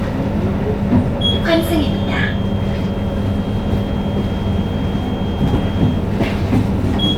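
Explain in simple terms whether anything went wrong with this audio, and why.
From 1.44 s to 6.10 s a thin, steady whistle near 3.2 kHz sits quietly behind the sound, swelling and fading slowly. This is a feedback whistle, likely from a loudspeaker feeding back into the microphone, held just short of howling.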